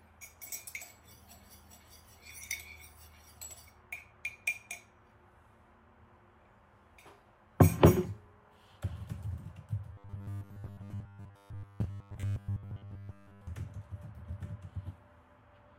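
A recording of sounds that turns robotic between 9.93 and 13.47 s. Over that stretch the audio takes on a rigid, metallic buzz fixed at 100 Hz, while the underlying sound only loosely shows through. The pattern is that of robotic sound from repeated short buffers. The likely cause is audio arriving too slowly, with the software looping a roughly 10 ms segment to fill the gaps. Around 70% of this section is repeated material, and the original audio in those gaps is lost.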